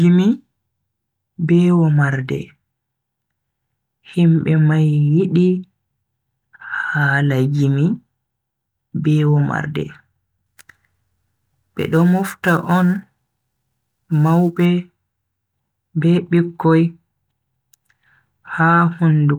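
From 10.46 s to 14.65 s, the speech picks up sample clock jitter. The converter's timing wanders, so each sample lands a little early or late. Here the wander is on the order of 10 microseconds. The resulting error tracks how steeply the waveform is changing. It sits roughly 30 dB below the signal. It is heard as a gritty hiss riding on the speech. It grows on loud, bright sounds and drops away in pauses.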